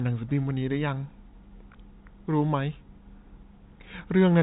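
No faults can be heard anywhere in this speech clip. It comes over a G.711 telephone coding path, so everything above about 3.8 kHz is missing and only a faint level-following hiss rides under the speech.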